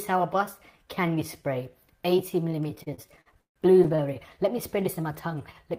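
From 2.75 s to 4.17 s the sound suffers repeated stalls, a stutter. The jitter buffer keeps running dry because packets arrive late or too slowly. Each time, the receiver stretches the last sound to bridge the wait. There are sixteen such stalls, the longest 143 ms, adding about 380 ms in all. Roughly a quarter of that stretch is filled in this way. Nothing is lost, but the audio drags and hiccups, and the longest stalls fade.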